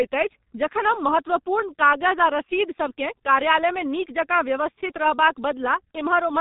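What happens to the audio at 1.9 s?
At 1.9 s the speech is muffled and hoarse, with smeared consonants and nothing above 3.8 kHz, as it is for the whole clip. That is heavy G.723.1 codec damage: its 30 ms frames and slowly updated voice model, at a rate that points to about 6 kbit/s, blur fast detail.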